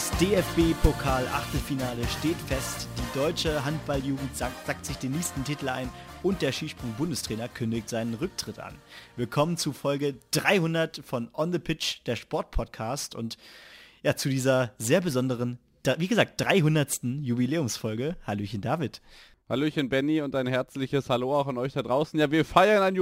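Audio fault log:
Throughout, crude rate conversion: samples are repeated rather than filtered, which fits a 44.1 to 48 kHz change, leaving a gritty inharmonic fizz around 25 dB below the signal. Unlike steady hiss, it rises and falls with loud, bright passages.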